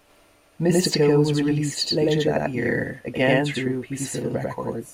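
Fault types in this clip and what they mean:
Channel delay (doubling): one channel runs about 93 ms behind the other, which fits a 4096-sample buffer. Summed to mono, the speech gets a distinct slap, a second copy at equal level trailing each syllable, and it stays like that throughout the clip.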